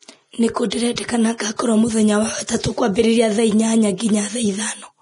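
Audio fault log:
Throughout, Vorbis compression: the speech sounds hissy and grainy, with a roughened treble and softened consonant edges, and nothing remains above about 10.6 kHz. The likely cause is heavy Vorbis encoding at a low bitrate that points to around 32 kbps. The encoder lowered its cut-off and quantised the upper residue so coarsely that fine detail turned into noise of similar energy, which produces the grain and the blurred attacks.
0.70 s, 0.96 s, 1.38 to 1.40 s and 2.47 s, pre-echo: each sharp onset is preceded by a brief smear of hiss, lasting 17 to 23 ms, and the onsets themselves sound soft rather than crisp. The transform codec spreads quantisation noise across an entire block. When a loud attack lands late in a block, the noise sized for that attack also fills the quiet stretch just before it, so the hiss arrives before the sound.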